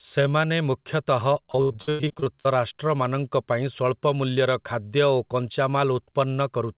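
Speech, band-limited to 4 kHz by the call codec, consistent with G.711 mu-law, shows repeated packet loss (robotic sound) from 1.46 to 2.47 s, right after "ସେମାନେ ମୁଖ୍ୟତଃ". Short dropouts up to 96 ms are patched by repeating prior audio, leaving about half the stretch concealed. The result is choppy and robotic, with chopped, smeared blocks on the spectrogram.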